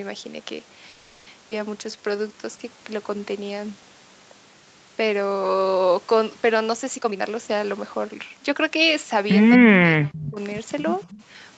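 Right at the start, from 0.89 to 1.28 s, there's a call audio freeze. The last bit of sound gets stretched into a fading buzzy tail for about 370 ms, and then the speech picks up exactly where it left off, with nothing lost. That's the signature of packets likely stalling in transit and the jitter buffer running dry, so the receiver papers over the hole. The catch is that the whole call now sits about 370 ms later than before.

Almost immediately after, at 1.50 to 1.53 s, comes a skip ahead. Playback lurches forward and roughly 150 ms of speech simply vanishes, stitched across with only about 10 ms of filler. You hear it as a tiny clipped jump, and it claws back some of the delay the freeze just added.

From 1.78 to 2.77 s the jitter buffer slow-down kicks in. The speech plays at 85% speed but keeps its normal pitch, because the receiver is repeating single pitch periods and slivers of pauses over and over, adding 155 ms in total. 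It sounds drawn out and sluggish, with sounds lingering too long, as the buffer rebuilds a cushion.

Later, from 6.96 to 9.44 s, the opposite happens with a jitter buffer speed-up. Here the speech runs at 115% speed, again at unchanged pitch, as the receiver snips out short pitch-period chunks, something like 400 ms worth overall. The effect is a hurried, slightly breathless delivery, which is the buffer shedding surplus delay after audio piled up.

Between 9.57 and 10.39 s there's speech suppressed in double talk. The level keeps dipping, at its worst by about 40 dB, which is basically gone, across roughly 700 ms in patches. It sounds like the talker is being chopped out in pieces. The likely cause is the echo canceller losing track while both ends talk at once and ducking everything to be safe.

Overlapping that, from 10.13 to 10.31 s, there's an echo leak. A faint copy of the speech trails 231 ms behind, at about 20 dB under the main level. 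It's most likely the far end's loudspeaker output getting past its echo canceller and being sent back. A second echo leak turns up from 10.80 to 11.09 s with the same 231 ms lag but quieter, about 30 dB down, just a ghostly scrap after the main speech.

In the background, the top end stops at 8 kHz throughout, consistent with the Opus call path running at that bandwidth.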